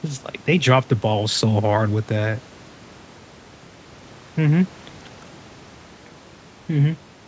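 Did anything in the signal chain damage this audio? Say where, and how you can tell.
No, nothing damaged this audio.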